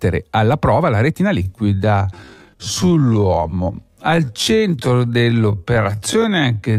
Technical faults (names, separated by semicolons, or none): time-stretched section